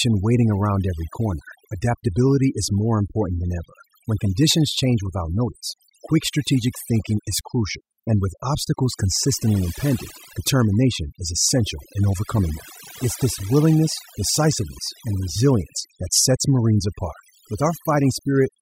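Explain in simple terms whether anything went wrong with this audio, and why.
The speech has overdone noise removal from start to finish. A cleanup tool was set too strong, so quiet parts of the sound vanish along with the background noise, leaving near-silent pauses with twinkling specks.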